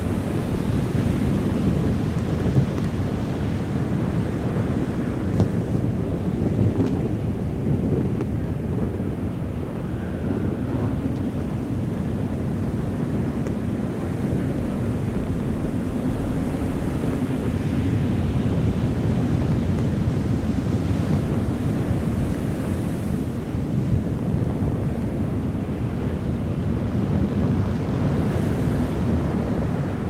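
No technical faults can be heard anywhere in the audio; the signal stays steady and intact throughout.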